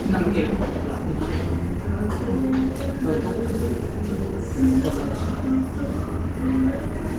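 Throughout, the sound is grainy and hoarse, likely Opus compression in hybrid mode near 16 kbps; a spectrogram shows noisy, smeared bands reaching 20.1 kHz.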